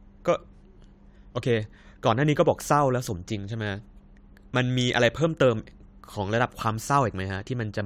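No technical faults are audible.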